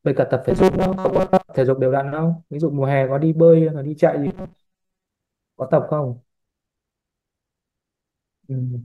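From 0.51 to 1.49 s, and again from 4.27 to 5.05 s, the speech turns into a rigid, metallic buzz fixed at 188 Hz that only loosely tracks the talking. This is robotic sound from repeated short buffers, likely caused by audio arriving too seldom, so a fragment of about 5.3 ms is looped to fill the gaps. The repeats impose that pitch, and much of the real audio in both stretches is skipped.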